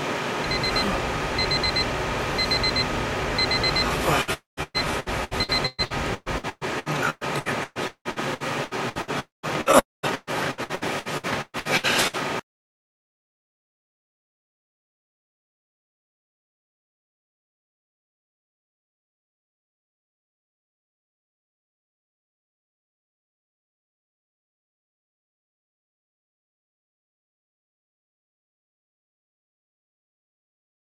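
From 4.21 to 15.28 s there is repeated packet loss, which gives the audio a robotic sound. Around fifty short gaps, the longest 175 ms, are each filled by stretching the preceding sound, so about a third of that stretch is patched. The result is choppy, with pieces missing.

Within that stretch, at 4.33, 9.20 and 9.79 s, there are longer holes of about 240 ms each. A brief buzzy continuation fades into 150 to 190 ms of silence before the sound resumes with that part missing. This points to a likely long network dropout rather than another short concealed gap.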